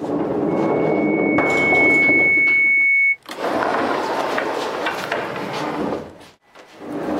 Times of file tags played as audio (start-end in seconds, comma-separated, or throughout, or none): none